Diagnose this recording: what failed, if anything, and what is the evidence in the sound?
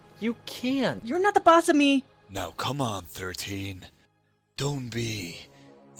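At about 1.0 s the sound jumps forward with no gap, as if nearly half a second were cut out and the two sides spliced together. This is a skip ahead in the network path or jitter buffer: a stretch of audio was dropped and playback resumed from later material.

From 1.12 to 2.14 s the sound runs about 9% fast while keeping its pitch, giving a hurried feel. This is jitter buffer speed-up: the buffer held excess audio and trimmed short pitch-period slices repeatedly, shedding about a tenth of a second to reduce delay.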